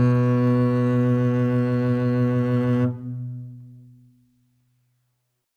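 No faults to report anywhere in the music.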